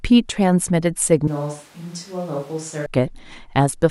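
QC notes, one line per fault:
1.28–2.86 s: switch to a distant microphone. Speech abruptly turns hollow and roomy, about 10 dB quieter with less bass and more room noise, likely from losing the close mic.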